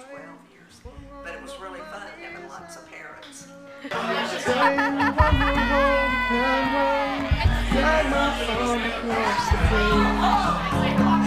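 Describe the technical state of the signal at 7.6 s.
At 7.6 s the signal is intact, with no audible fault at that point.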